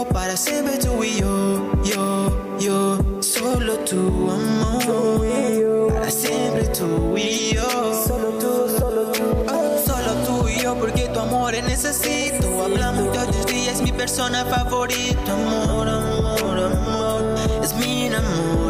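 From 12.15 to 16.33 s, a train of clicks ticks regularly at 7.9 per second, likely interference, showing as evenly spaced vertical spectrogram lines.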